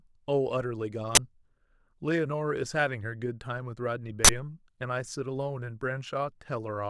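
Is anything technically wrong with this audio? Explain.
Yes. Two uninitialised buffer faults hit this speech, at 1.15 to 1.17 s and 4.25 to 4.29 s. Playback read a buffer before audio reached it, so leftover memory became samples. Each is a loud crack or burst of digital noise. The 21 ms and 43 ms lengths fit 512- and 1024-sample buffers.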